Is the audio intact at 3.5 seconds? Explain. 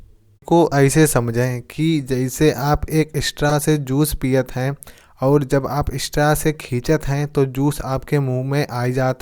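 No. From 3.49 to 3.52 s the speech is interrupted by a corrupt frame decoded. Bits inside a compressed frame were flipped, and the decoder played it anyway, so misread gain values and codes placed energy at frequencies that do not belong to the signal. The damage covers roughly two frames, about 25 ms, and is heard as a short blip of noise with an error peak around -5 dBFS.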